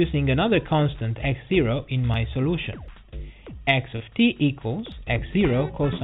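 Dropped buffers (overrun) at 2.14 s and 2.88 s: the sound jumps forward at each point, with no gap of silence between the two sides. The likely cause is that the capturing program fell behind and the hardware overwrote samples it had not yet collected, so the stretch is simply missing and the audio on either side is butted together. The first jump loses about 70 ms. The second loses about 20 ms.

Short concealed packet loss from 3.96 s to 4.03 s: about 40 ms of audio failed to reach the decoder in time, and the receiver papered over the hole with roughly 38 ms of synthesized continuation, extending the preceding sound before fading back into the real signal. It is heard as a brief smeared wobble rather than a hard break, within a band that stops at 4 kHz on this call path.

A further dropped buffer at 4.92 s repeats the first pattern, a skip ahead of about 40 ms.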